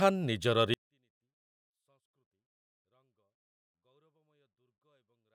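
At 0.74 s a 24-bit alignment error sets in: samples held in the low bytes of a 32-bit word are read as full 32-bit integers. From there to the end the speech stays clean but falls by about 48 dB at once, leaving it barely audible.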